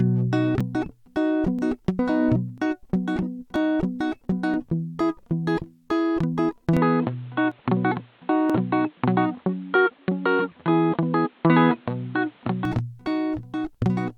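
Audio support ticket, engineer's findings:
Overlap between stream segments: segment timestamps overlap on 1 s boundaries, and the player trims real audio, 5 to 16 ms at a time. Waveform jumps, heard as clicks or micro-skips in the music at 0.61, 1.59, 2.58, 3.56, 4.54, 6.53, 7.52 and 8.50 s.

Input switched to a poorer device, likely a capture change mid-stream. From 6.77 to 12.65 s, nothing above 4.3 kHz and added background noise about 35 dB below signal. Music turns dull and boxy abruptly, with no gap or level step at either switch.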